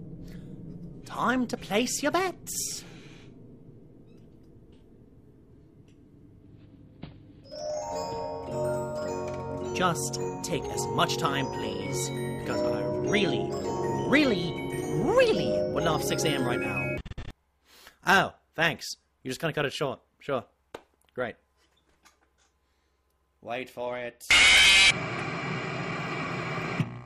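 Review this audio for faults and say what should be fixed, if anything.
From 23.87 to 25.99 s there is a Bluetooth SBC bit pool drop: the treble turns dull and gritty noise rises as the link starves the encoder, consistent with a fall from bit pool 31 to about 15. On a spectrogram the upper bands thin out and speckle, then recover. Keeping the wireless link uncongested, or using a wired path for capture, would prevent it.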